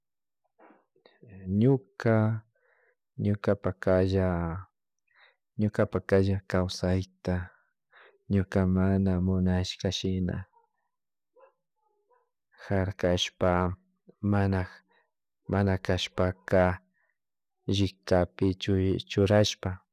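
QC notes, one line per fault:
No faults heard anywhere in the speech; nothing to log.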